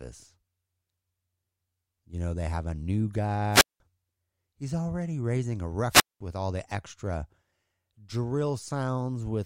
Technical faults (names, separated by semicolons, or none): wireless microphone squelch dropout